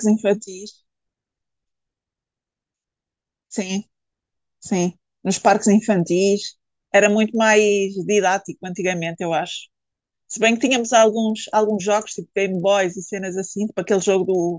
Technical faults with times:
0.00-14.59 resampler restarted on every block

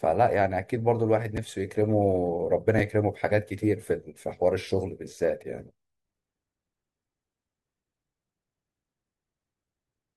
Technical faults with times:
1.37 chunks out of order
2.78 chunks out of order

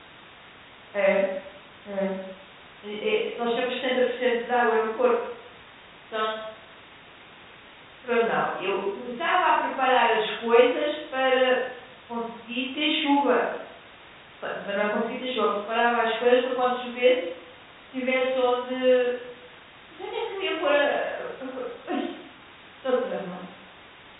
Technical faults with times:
none

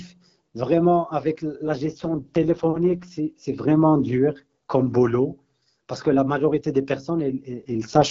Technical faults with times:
1.65-3.08 AMR rate drop
7.50-8.10 AMR rate drop

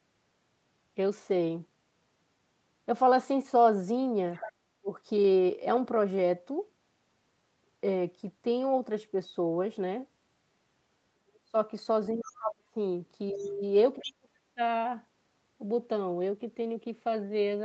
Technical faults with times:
4.34-4.52 other side's voice leaking through
4.79-4.91 speech suppressed in double talk
11.15-11.56 speech suppressed in double talk
12.13-12.77 speech suppressed in double talk
13.32-13.51 other side's voice leaking through
13.32-13.62 speech suppressed in double talk
13.98-14.11 other side's voice leaking through
14.03-14.61 speech suppressed in double talk

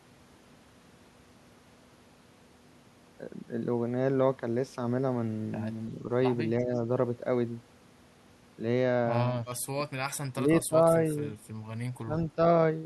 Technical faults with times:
6.61-6.71 speech suppressed in double talk
9.48-9.58 echo leak
9.70-9.80 speech suppressed in double talk
10.43-10.94 speech suppressed in double talk
12.05-12.13 speech suppressed in double talk

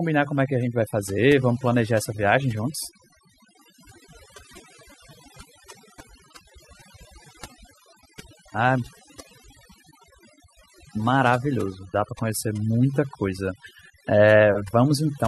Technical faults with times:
0.00-15.27 overdone noise removal

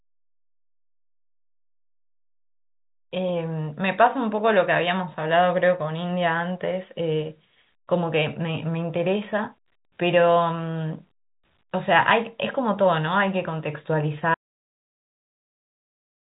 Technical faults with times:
14.34-16.38 audio dropout to silence

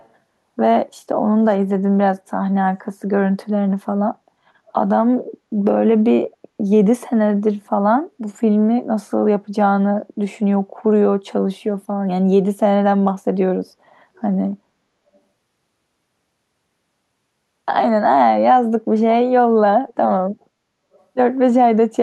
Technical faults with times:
0.00-0.08 echo leak
1.49-1.54 echo leak
14.17-14.21 echo leak
15.15-15.19 echo leak
19.88-19.94 echo leak
20.93-21.00 echo leak

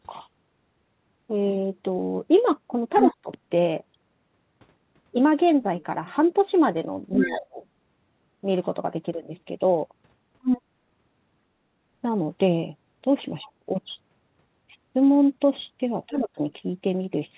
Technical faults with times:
2.95-3.16 other side's voice leaking through
3.03-3.30 speech suppressed in double talk
7.15-7.41 other side's voice leaking through
7.17-7.62 speech suppressed in double talk
10.43-10.61 other side's voice leaking through
13.43-13.69 speech suppressed in double talk
16.09-16.40 speech suppressed in double talk
16.17-16.23 other side's voice leaking through

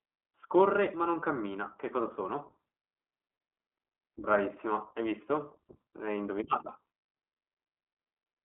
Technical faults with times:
0.00-8.45 iLBC codec

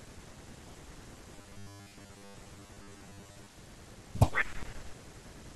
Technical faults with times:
1.36-3.49 robotic sound from repeated short buffers

